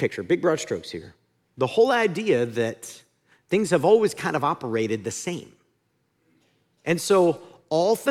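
Nothing technically wrong can be heard in this speech recording, and the signal stays intact and continuous for its whole duration.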